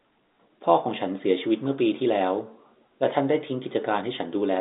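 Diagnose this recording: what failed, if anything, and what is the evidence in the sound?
Nothing stood out on listening to this speech; no stage of the chain shows any audible failure.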